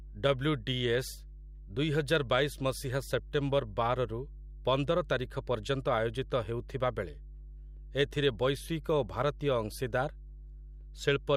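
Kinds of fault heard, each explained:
Mains hum: present throughout the clip, a steady 50 Hz tone with low harmonics sitting only about 15 dB below the speech. A ground loop or nearby transformer has let the power line leak into the signal path, so the drone continues under every pause.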